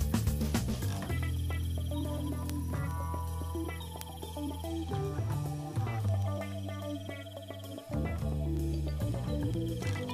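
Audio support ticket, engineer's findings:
Word clock ticks from 0.15 to 10.09 s, sharp and uneven in strength, roughly every 0.15 s, about 70 in all. Receiver likely free-running off the digital input's clock, about 150 ppm apart. Each slip drops or repeats one sample.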